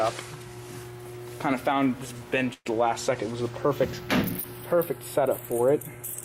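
Throughout, the channels are drifting apart: the two sides run on clocks a few tens of parts per million apart, so their offset creeps to around a tenth of a millisecond, and summed to mono this gives a slow flanging sweep. From 2.53 to 2.68 s, a burst of packet loss: the receiver stretches the last sound for about 117 ms, fades it out, leaves 30 ms of silence, then resumes with roughly 120 ms missing.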